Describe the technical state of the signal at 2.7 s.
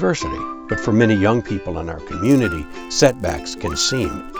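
At 2.7 s the audio is inside a stretch where the resampler restarted on every block. It runs from 2.24 s to the end of the clip. The upsampling from 16 kHz to 48 kHz is done one 10 ms block at a time. Each block's edges are filtered without the real neighbouring samples, so every boundary carries a small error. These repeat at 100 per second. They merge into a buzz at 100 Hz that sounds only while there is signal.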